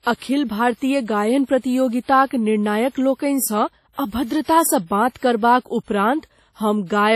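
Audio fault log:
throughout: WMA compression, likely at around 32 kbps; long transform blocks smear quantisation noise into heavy ringing, washy hiss tracking the speech, nothing above 16.5 kHz.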